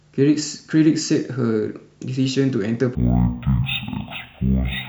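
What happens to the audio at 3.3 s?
At 3.3 s the speech is in the middle of a stereo-read-as-mono fault running from 2.95 s to the end at 4.89 s. Left and right samples are taken as one channel, so playback drops to half speed and an octave low. Unlike a plain sample-rate mismatch, a faint mirrored copy also appears in the upper spectrum.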